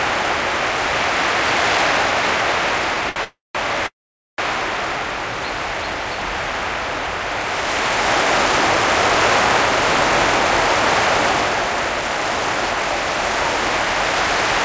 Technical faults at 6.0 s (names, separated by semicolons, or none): none